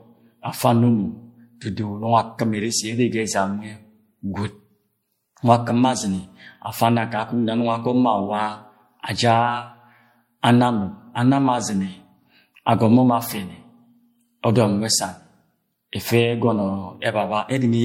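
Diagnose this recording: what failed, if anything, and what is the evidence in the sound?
The codec stage is at fault: the speech carries generation loss throughout, with a swirly, hollow texture and blurred consonant attacks from start to finish, and nothing above 16.5 kHz. The band limit and the artefact character point to MP3 at about 64 kbit/s, likely re-encoded around four times. What sets it apart from a single low-bitrate encode is that the smearing and spectral holes are heavier than that bitrate alone produces, because each pass re-quantised on a shifted frame grid.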